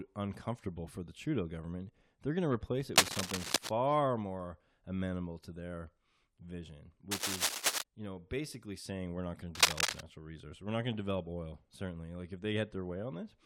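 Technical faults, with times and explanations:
2.96–3.69 s, 7.11–7.82 s and 9.55–10.01 s, cable scratch noise: three separate bursts of dense, irregular crackle and rustle sit on top of the speech, each lasting under a second and peaking at roughly 5 dB above it. The likely cause is a worn cable, connector or control being moved, so its contact resistance jumps erratically and injects broadband noise into the signal for as long as it is disturbed.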